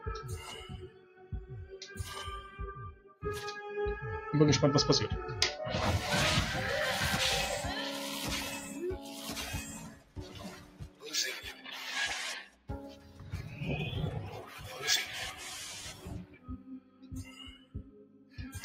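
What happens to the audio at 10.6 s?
At 10.6 s the sound sinks noticeably. Its sustained parts and fading tail fall away while any sharp onsets still come through. This dip runs from 9.87 to 11.08 s, with the level dropping by up to about 14 dB over roughly a second in total. It is sound cut by the noise suppressor: a processor tuned for speech judged this steady, decaying material to be noise and pulled it down harder than the surrounding audio.

That moment sits inside a broader fault, a noise suppressor applied to music or sounds, which is active across the clip. Because the processor keeps deciding which parts of the signal are unwanted, the level swings by something like 20 dB. Held tones and ambience are pushed down and released repeatedly, which gives the audio a pumping, thinned-out quality.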